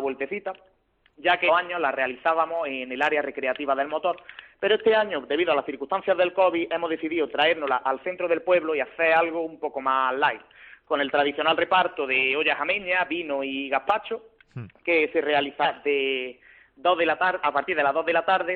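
At 1.44 to 1.50 s the audio suddenly lurches forward. That's compressed frames skipped: a run of frames never got played, either missing or rejected by the decoder, so roughly 400 ms of material just vanishes, which fits about seven 46.4 ms frames. The same thing happens at 15.61 to 15.66 s, with a smaller jump of around 150 ms.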